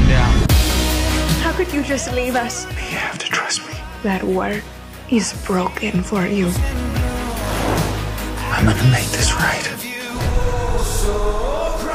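At 2.30 s a loose connector crackle breaks in. It lasts about 80 ms and ends at 2.38 s. A worn or dirty contact in the signal path is touching and separating many times in quick succession. Each break chops the audio off, and each reconnection snaps it back. Any DC on the line turns those transitions into pops. The result is a short, irregular burst of scratchy crackle over the sound.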